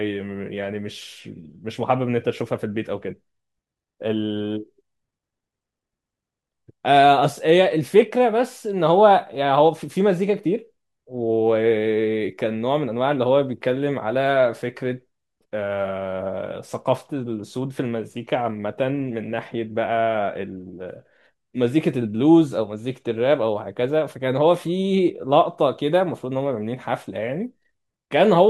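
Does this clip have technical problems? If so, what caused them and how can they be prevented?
No, there are no technical problems to report in this speech clip. With nothing to trace back to a cause, no preventive steps are needed.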